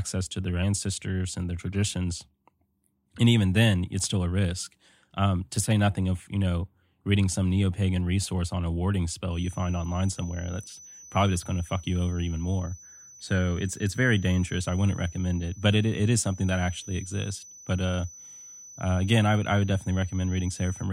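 A speech clip with a feedback whistle. From 9.28 s, right after "resource on a warding", a thin 6 kHz tone sits roughly 25 dB below the speech until the end, swelling and fading slowly in level. The likely cause is a loudspeaker-to-microphone loop held just short of runaway feedback.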